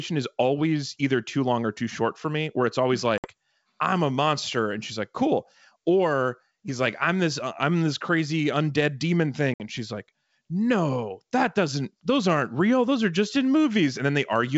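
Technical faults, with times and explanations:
3.18–3.29 s and 9.54–9.68 s, packet loss on an ADPCM call: each time about 60 ms of the wideband G.722 speech, a few packets' worth, drops to hard-edged silence. Unlike a plain dropout on an uncoded stream, the decoder's adaptive predictor and step size are left out of step with the sender's, so the speech comes back briefly disturbed and settles within some tens of milliseconds.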